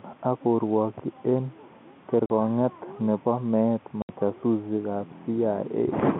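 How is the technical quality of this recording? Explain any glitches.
The speech has two clear dropouts, heard over a telephone-band line that cuts off above about 3.5 kHz.

Packet loss filled with silence occurs from 2.26 to 2.30 s (40 ms) and from 4.02 to 4.09 s (70 ms). Audio packets never arrived, and the receiver inserted digital silence instead. Both gaps are multiples of 10 ms, which fits 10 ms packets. Each hole has abrupt edges. That separates it from concealed loss, where the gap is smoothed over or filled with repeated sound.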